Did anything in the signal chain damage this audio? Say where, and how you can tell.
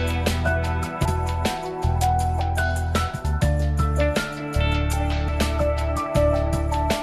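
Yes. The damage is at the codec stage, as compressed frames skipped. The audio jumps forward at 1.05, 3.24 and 5.28 s, losing roughly a third of a second each time. That fits about ten dropped 26.1 ms frames.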